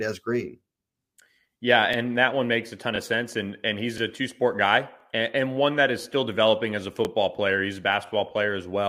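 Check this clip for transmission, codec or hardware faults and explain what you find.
The speech was processed in 1.0-second chunks that overlap, a fault known as overlapping chunks. Each new chunk begins about 23 ms before the previous one finished, so that sliver of audio plays twice at every join. The joins fall at 1.93–1.96, 2.96–2.98, 3.98–4.00, 5.00–5.03, 6.03–6.05, 7.05–7.07 and 8.07–8.10 s. Each one is heard as a brief click or stutter, and together they recur roughly once per second.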